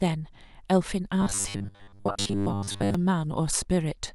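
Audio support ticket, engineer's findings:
Robotic sound from repeated short buffers, 1.22 to 2.95 s. Speech collapses into a rigid, metallic buzz at 100 Hz that still roughly tracks the words. Likely cause: playback starved of new audio, looping a 10 ms slice over most of that span while real audio is skipped. Differs from codec warble or pitch-shifting: the buzz pitch stays fixed at 100 Hz, ignoring intonation, and content is lost rather than smeared.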